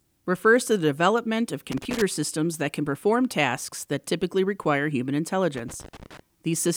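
An irregular burst of crackle and scratching breaks into the speech from 1.72 to 2.02 s, and again, longer, from 5.55 to 6.20 s. This is loose connector crackle: a worn or dirty contact making and breaking as it moves, chopping the signal.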